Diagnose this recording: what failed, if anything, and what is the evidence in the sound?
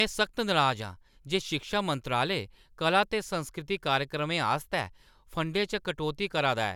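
Nothing failed here: the speech runs with no breaks, glitches or damage at any stage from the wiring through to playback, so there's nothing to diagnose.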